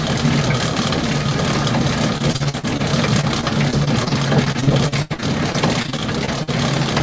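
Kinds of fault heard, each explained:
Repeated packet loss (robotic sound): gaps from lost packets, patched by extending the last sound, at 2.18–2.81 s and 3.21–6.49 s. The waveform shows stuttering looped chunks, and the spectrogram shows repeated, smeared frames.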